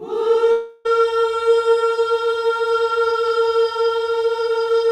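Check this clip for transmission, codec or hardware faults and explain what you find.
There is one fault, a long network dropout between 0.51 and 0.87 s. For about 0.34 s no new audio reaches the output, and that section is lost. The receiver covers almost the whole gap by extending the last sound it had, so the break comes out as a smeared, fading buzz rather than silence. Audio then resumes with the missing portion skipped. The likely cause is a burst of lost packets on the link.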